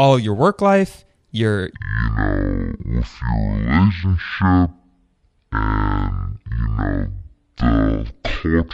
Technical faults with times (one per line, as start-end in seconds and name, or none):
1.75-8.73 section at the wrong speed